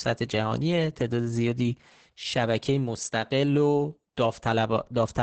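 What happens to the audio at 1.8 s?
Opus voice compression affects this moment, as it does the whole clip. The speech is muffled, hoarse and slightly robotic, with nothing above 8.6 kHz. The coarse excitation coding heard here points to a SILK wideband coder at roughly 10 kbps.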